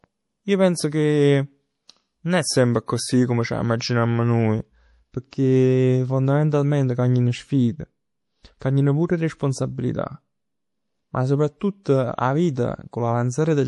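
Across the whole speech clip nothing sounds above 11.5 kHz, and the upper range has a watery, swirling quality, with metallic chirps on sibilants. This is MP3 compression, likely at a low bitrate around 48 kbps: the encoder cuts the treble at a fixed frequency and drops weak spectral lines that switch on and off between frames. A simple low-pass filter would dull the sound just as cleanly but would not produce that shifting, bubbling texture.

Pre-echo appears at 5.30 to 5.33 s, 8.59 to 8.61 s (just before "pur 'e") and 11.83 to 11.86 s, each a hiss of about 20 to 23 ms leading into a sharp onset. The codec spreads quantisation noise across a whole block, so noise meant for the loud attack leaks into the quiet moment before it, and the attack sounds smeared. Unlike a click or breath, this hiss always runs straight into the attack it belongs to.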